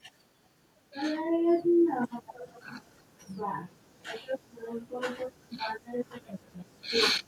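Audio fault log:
2.26–2.66 s and 2.82–3.03 s, echo leak: a faint copy of the speech returns 373 ms late, about 20 dB down, then much weaker, near 40 dB down, likely from a far-end echo canceller. Spectrogram shows ghost formant bands trailing by 0.37 s.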